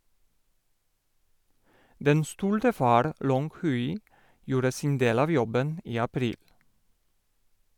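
Speech recording with no audible technical faults.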